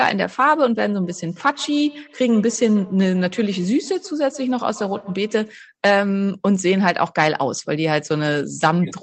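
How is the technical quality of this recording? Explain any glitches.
The recording has one problem. From 1.03 to 5.6 s there's feedback echo between two devices: a second device replays this microphone's signal, which comes back roughly every 150 ms, about 21 dB below the speech, thinning and ringing. Unlike room reverb, the repeats are discrete and evenly spaced.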